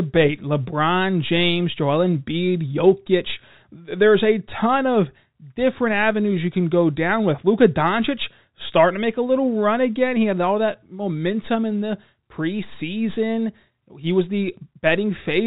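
There are no technical faults to describe in this speech, which comes through the 64 kbps G.711 telephone channel as that format normally sounds.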